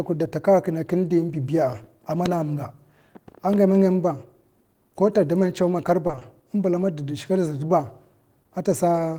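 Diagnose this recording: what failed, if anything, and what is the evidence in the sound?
Network's the culprit: repeated packet loss (robotic sound) between 6.07 and 6.23 s. Several short holes, none longer than 20 ms, get patched by stretching the previous audio, so about half that stretch is filled-in sound. That's what gives the choppy, robotic texture.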